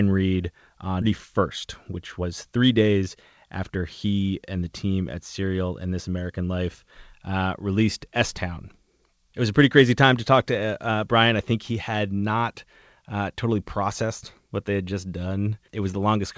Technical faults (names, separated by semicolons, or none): skip ahead; jitter buffer speed-up